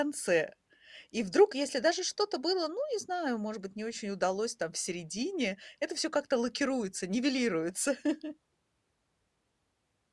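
No technical faults can be heard anywhere in the recording.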